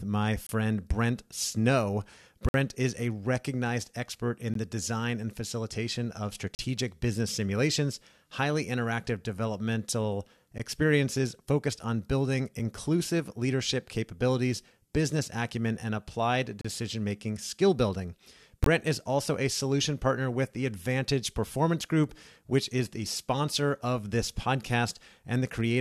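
Speech, interrupted by hard-edged silent holes from gaps between stream segments. They fall at 0.47–0.49, 2.49–2.54, 4.54, 6.55–6.59, 10.58, 12.59, 16.61–16.65 and 18.64–18.66 s. Each lasts 4 to 54 ms. The roughly two-second spacing fits 2-second segments whose timestamps leave small gaps. The player fills each gap with silence, so nothing is lost.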